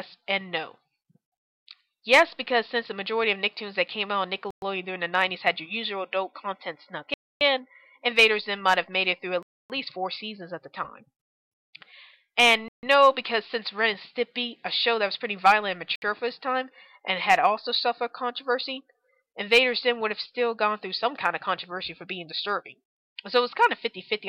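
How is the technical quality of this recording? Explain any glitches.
The recording is marred by five dropouts where the sound cuts abruptly to silence and then resumes: at 4.51 s for about 117 ms, 7.14 s for 271 ms, 9.43 s for 272 ms, 12.68 s for 147 ms, and 15.96 s for 65 ms. The likely cause is a Bluetooth stall. Radio interference delayed packets, the receiving buffer emptied, and playback halted until retransmitted data arrived, leaving clean holes rather than noise or distortion.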